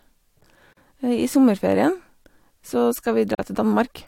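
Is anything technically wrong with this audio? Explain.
Yes. There is a gap at a join of encoded pieces at 0.73 s and again at 3.35 s. The speech appears to have been encoded in separate pieces and spliced without trimming, so each join keeps the encoder's leading silence and its padded final frame. The result is a dropout of about 38 ms at the first join and 42 ms at the second, with smeared edges. The speech then resumes exactly where it stopped.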